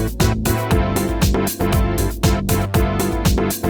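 No technical faults are audible.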